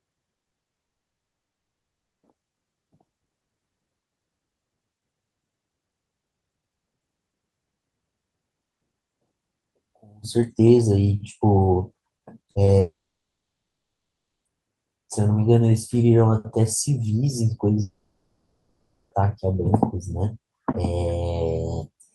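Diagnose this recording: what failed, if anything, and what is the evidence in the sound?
The network stage is at fault from the start. Between 0.35 and 0.79 s there is repeated packet loss (robotic sound): eight gaps, the longest 60 ms, with about half of that span rebuilt by concealment. Each hole is patched by extending the previous sound, so the audio turns choppy with pieces missing. On a spectrogram the harmonics break into short smeared, frozen blocks. The waveform shows repeated, near-identical cycles where real audio should be.

Three long network dropouts follow, likely caused by the network delivering nothing for over a second at a time. From 0.79 to 2.25 s the full 1.44 s is silent. From 12.79 to 14.47 s, 1.66 s is lost and about 1.5 s of it is dead air. From 17.81 to 19.13 s, 1.3 s is lost but only 0.4 s is silent, so a fading buzz or hiss fills much of the gap. The waveform goes flat, and the spectrogram shows blank columns after a decaying concealment tail.

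Two brief short concealed packet losses occur just before the second dropout, at 12.51 to 12.57 s (40 ms) and 12.65 to 12.69 s (20 ms). The receiver bridged each hole by continuing the preceding pitch or noise and then crossfading back. They are heard as a quick smear or wobble. On a spectrogram they appear as thin vertical strips of blurred, held harmonics. The Opus path's 12 kHz band edge stays visible wherever audio is present.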